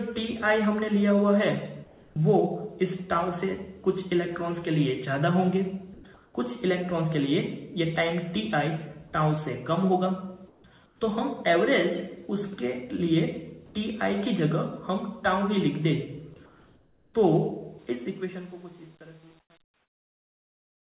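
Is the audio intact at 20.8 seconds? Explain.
No. At 20.8 seconds the audio sits inside truncation distortion on a fade, which runs from 17.79 s to the very end at 20.87 s. The fade-out, starting at 17.79 s, passes through a stage that keeps too few bits and adds no dither, which fits 8-bit truncation. As the level drops toward the smallest step, the waveform collapses into coarse square steps. From 18.03 s onward the tail turns gritty.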